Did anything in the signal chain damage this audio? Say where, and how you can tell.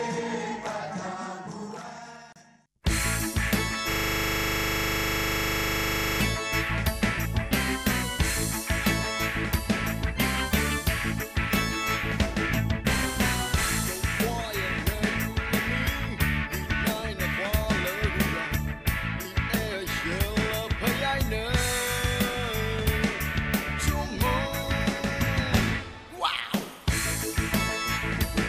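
Yes, there's a system hang loop from 3.92 s to 6.21 s, and it sits at the driver or buffer stage. For just over two seconds the same 40 ms slice of audio repeats exactly, 57 times over, so you hear a steady buzz at 25 Hz. What's happened is the host or driver froze while the interface kept replaying its ring buffer. A 40 ms loop fits a buffer of that length.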